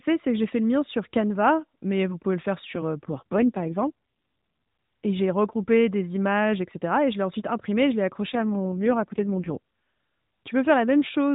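AMR rate drops at 3.12 to 3.87 s, after "le faire sur euh", and at 8.34 to 9.56 s, after "ensuite imprimé je l'ai": the codec spends fewer bits on speech, turning the voice buzzy and synthetic without gaps, which fits a 12.2 to 4.75 kbps fall.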